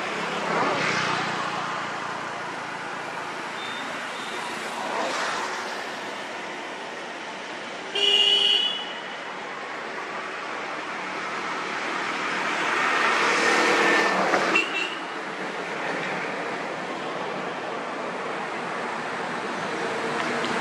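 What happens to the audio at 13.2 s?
Nothing goes wrong at 13.2 s; the audio plays through that moment intact, with no dropout, click or other disturbance.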